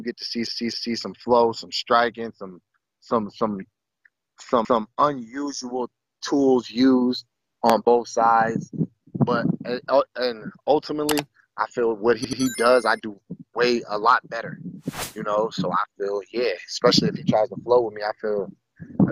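Repeated frames first appear at 0.47 s. A 256 ms block of audio plays three times in a row, running to 0.98 s. A stored chunk of the compressed stream was decoded again. This stutter adds 512 ms. At 4.65 s, a 170.7 ms block repeats once, to 4.82 s. At 12.24 s, a short 85.3 ms block plays three times, ending at 12.42 s. All three block lengths fit whole multiples of an 85 ms frame.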